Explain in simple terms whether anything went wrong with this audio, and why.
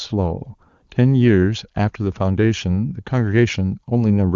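Nothing went wrong here.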